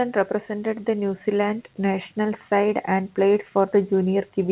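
Nothing stood out on listening to this speech, which comes through a call path that leaves nothing above 4 kHz.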